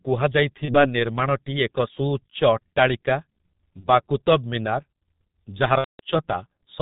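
From start to finish the speech carries heavy G.723.1 codec damage: nothing above 4 kHz, a hoarse, muffled tone and smeared consonants, which fits a roughly 6.3 kbit/s stream. Its slowly updated voice model separates it from simple band-limiting, which would dull the sound without roughening it.

At 0.65 s, 3.80 s and 5.78 s there is VoIP packet loss concealed by the speech codec. The decoder stretches the last sound into a fading buzz or coloured noise. The first two glitches fit a single lost 30 ms frame, with the voice staying weak until about 0.85 s and 3.88 s. The last fits around 210 ms of loss, seven frames in a row, so the sound is muted from the third lost frame, and it recovers near 6.00 s.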